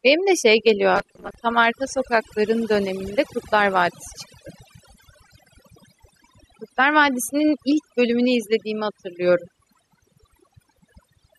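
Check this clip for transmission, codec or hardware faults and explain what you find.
Two faults are present in this speech clip, one continuous and one brief.

Overdone noise removal runs throughout. Aggressive spectral suppression mutes bands near the estimated noise floor, leaving near-silent gaps with twinkling specks.

Robotic sound from repeated short buffers appears from 0.95 to 1.35 s. It is likely caused by late audio being replaced with about 5 ms loops for roughly half that span, which imposes a rigid 200 Hz metallic buzz.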